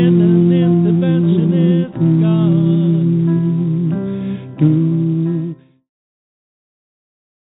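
The sound comes through a G.711 mu-law call path at 64 kbps, so nothing is present above 4 kHz, and it ends with a smooth, edit-style fade-out that begins around 4.5 s and reaches silence at 5.91 s.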